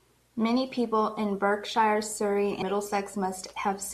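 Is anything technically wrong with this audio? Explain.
Yes. At 2.59 to 2.62 s the speech is interrupted by damaged data in the compressed stream, lasting about 30 ms. Corrupted bytes in that stretch of the file left the decoder unable to parse the affected frames correctly, so it produced garbage output and lost sync before locking onto the next valid frame header. The result is a short glitch in the speech.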